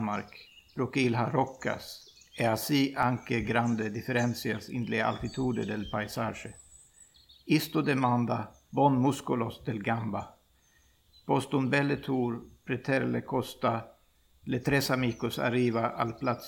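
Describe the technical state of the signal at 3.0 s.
At 3.03 s the output buffer was likely not filled in time, and a block of about 1.3 ms, which fits a 64-sample buffer, was replaced with zeros. This block of digital silence drops the sound to zero and back with no fade, so it is heard as a single sharp tick.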